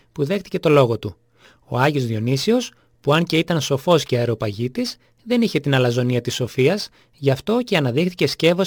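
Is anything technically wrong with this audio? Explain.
Yes. Crude rate conversion runs throughout. Samples were repeated at nearest-neighbour positions without filtering, consistent with a 44.1 kHz to 48 kHz conversion. This leaves an error roughly 30 dB below the signal, heard as gritty inharmonic fizz on loud, bright passages. A spectrogram would show faint stray lines and a raised noise haze that does not follow the harmonics, and a zoomed waveform would show small stair-steps.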